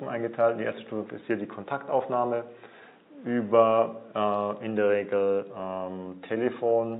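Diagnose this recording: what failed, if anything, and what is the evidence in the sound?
Nothing in this recording points to a failure at any stage of the chain. No event in the sound marks a problem in the wiring, conversion, processing, transport or playback.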